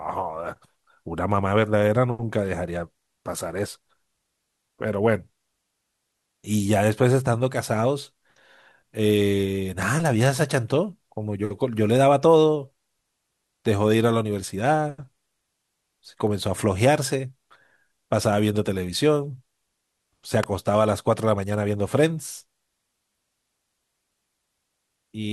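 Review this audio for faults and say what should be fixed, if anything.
Two sharp snaps sit on top of the speech, one at 9.82 s and a louder one at 20.43 s. Each is just a few milliseconds long, peaking at about -15 dBFS and about -10 dBFS. That tight, dry crack is the signature of an electrical switching spike, likely from a nearby switch, motor or static discharge arcing and coupling into the audio line. Both clicks are worth repairing. To prevent it, keep mic cables away from switched loads and power gear, and use balanced, well-shielded runs.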